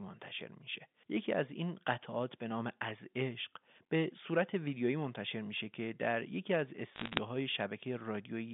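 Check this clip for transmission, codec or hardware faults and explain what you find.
There's one real fault here, sitting on a phone line that's otherwise band-limited to roughly 150 Hz to 3.6 kHz, as you'd expect from G.711 mu-law coding.

Between 6.96 and 7.19 s you get bit errors on a digital phone line. Flipped bits each corrupt a single sample. At a rate somewhere under one percent, the hits on sign or high-order bits come through as a short burst of sharp ticks, a crackle laid over otherwise unchanged speech.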